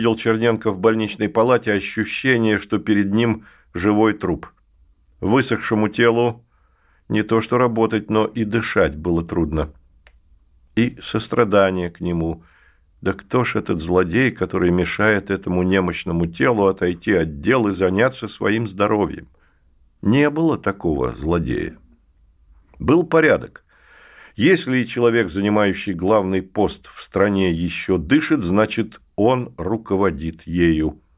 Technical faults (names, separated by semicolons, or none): none